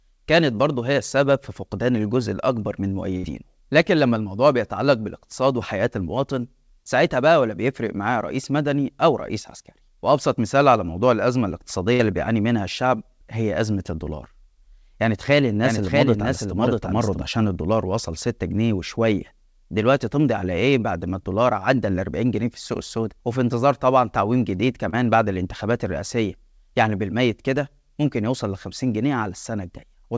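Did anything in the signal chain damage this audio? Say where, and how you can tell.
Yes. Two bursts of packet loss in the network stage, at 3.17–3.26 s and 11.93–12.02 s. Each shows about 60 ms of extended, fading sound, then a jump that skips about 60 ms. On a spectrogram, frozen harmonics or smeared noise decay before the pattern resumes abruptly.

A doubled audio track runs from 15.64 to 17.22 s: a full-band copy roughly 0.7 s behind and about 5 dB quieter, with no room colour. The likely cause is a second capture through a slower path or an overlapping edit. The waveform shows a delayed replica overlaid, appearing and vanishing abruptly.

There is also a short concealed packet loss at 24.89–24.95 s, where about 30 ms was synthesised from the preceding sound and blended back. It is heard as a brief smear or wobble and appears as a thin, slightly blurred stripe on the spectrogram. In the call codec stage, G.722 leaves nothing above 8 kHz.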